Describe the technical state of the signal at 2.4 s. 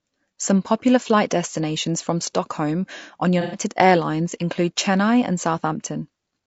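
At 2.4 s the speech carries the same plainly audible damage as the rest of the clip: a rough, grainy texture, likely from low-delay AAC compression at a low bitrate near 32 kbps. Its short frames resolve pitch harmonics poorly, so a spectrogram shows smeared harmonics with noise filling the gaps and a thin, synthetic-looking top band.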